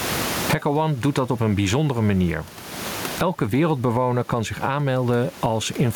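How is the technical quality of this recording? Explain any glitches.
The recording has one fault, gain pumping, running through the whole speech clip.

Gain pumping, throughout: the level swings by roughly 25 dB, which likely comes from input gain set far too high and a fast limiter or compressor clamping down on each loud sound. Loud and soft passages end up squashed closer together, and the room noise sits about 31 dB below the speech.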